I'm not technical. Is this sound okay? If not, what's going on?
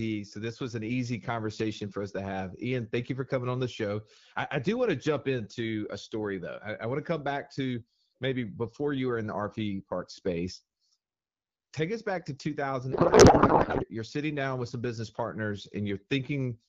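No. From about 12.92 to 13.86 seconds, the speech suddenly turns into garbled, warbling noise that barely follows what is being said, then snaps back to normal. This is a codec payload misread. The phone call uses HD Voice, which packs each slice of speech into a compact bundle of bits. For that stretch, the receiving end unpacked the bundles using the wrong layout, so every piece landed in the wrong place and came out as nonsense.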